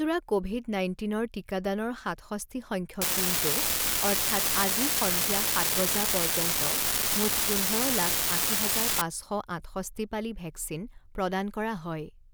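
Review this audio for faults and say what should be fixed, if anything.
From 3.01 s to 9.01 s, right after "ক'ভিড নাইণ্টিনৰ টিকাদানৰ সাতষষ্ঠি", the speech carries an unreliable data bit: a steady crackle and fizz that continues through the pauses, then stops cleanly. One data line is flipping at random, so a fraction of samples are off by one fixed step, each error landing as an identical spike of about -12 dBFS. That step size points to a high-order bit. Prevent it by checking converter wiring, connectors and bus timing margins before recording.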